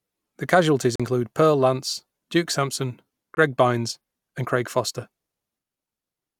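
The stream most likely lost packets on the way to the headphones, a Bluetooth dropout: the speech cuts to silence from 0.96 to 1.00 s (about 40 ms) and again from 3.35 to 3.37 s (about 20 ms), resuming further on, as if the audio had kept playing.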